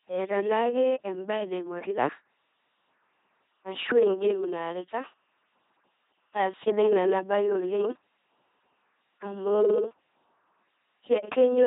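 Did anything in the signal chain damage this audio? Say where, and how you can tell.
Yes. The speech sounds buzzy and robotic throughout, with nothing above 3.8 kHz. This points to the codec stage, an LPC-10 vocoder at a rate that fits 2.4 kbit/s. It resynthesises each moment from a pulse train or noise through a short filter, so the natural voice is heavily lost.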